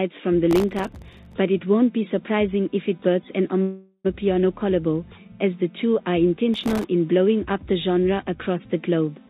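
A gritty burst of crackle tears across the audio from 0.51 to 1.33 s, and a shorter one from 6.54 to 6.84 s. This is processor overload crackle: the processor fell behind and missed dozens of deadlines in quick succession, each on a very short buffer of under a millisecond, and each miss left a tiny hard-edged hole of silence. Packed together, those holes read as tearing rather than separate clicks. At 3.62 s the sound stalls into a fading continuation of itself that ends in about 50 ms of silence before resuming at 4.07 s. This is a call audio freeze, likely from packets arriving late and the jitter buffer running dry. About 425 ms is filled in, nothing is lost, and everything afterwards plays that much later. All of this sits on a narrowband call path with nothing above 4 kHz, which fits G.711 mu-law at 64 kbps.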